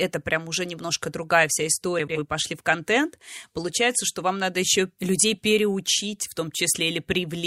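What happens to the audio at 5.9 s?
Nothing goes wrong at 5.9 s; the speech carries on intact through that moment, with no dropout, click or distortion to be heard.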